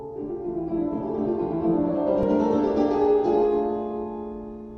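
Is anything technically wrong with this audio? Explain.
Yes. At 2.23 s there is an underrun with held sample. The output buffer ran dry for 2.67 ms, a gap of 128 samples. The converter held its last value, so the waveform flattens. About 3 ms of audio was lost.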